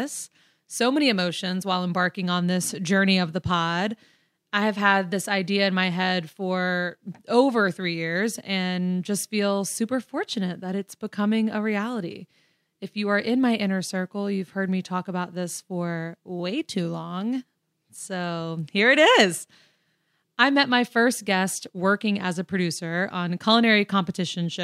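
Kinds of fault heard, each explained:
Nothing technical goes wrong anywhere in this speech recording, so there's no fault to list here.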